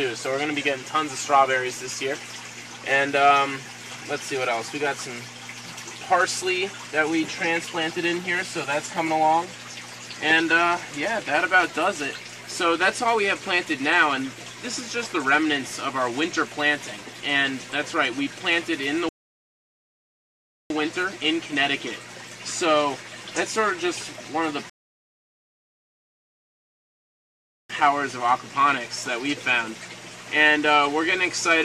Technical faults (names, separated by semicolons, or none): rebuffering stall